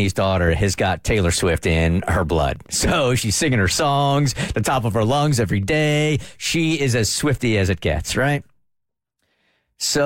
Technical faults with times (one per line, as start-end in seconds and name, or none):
2.26-6.26 Wi-Fi interference